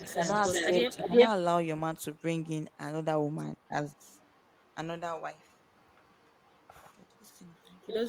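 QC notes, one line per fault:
0.00–1.28 s: echo leak. A delayed copy of the speech arrives about 364 ms late and is louder than the speech itself, likely from a loudspeaker echo the canceller failed to remove.
0.04–0.24 s and 0.59–1.16 s: speech suppressed in double talk. The speech dips by roughly 15 dB and then 10 dB in short pieces, likely because the echo canceller turned down both talkers during overlap.
2.17–2.77 s, 3.57–4.74 s, 5.38–6.67 s and 7.06–8.09 s: echo leak. A faint residual copy sits roughly 30 to 40 dB below the speech. Its delay drifts from 370 to 388 ms, likely leftover loudspeaker echo that was not fully cancelled.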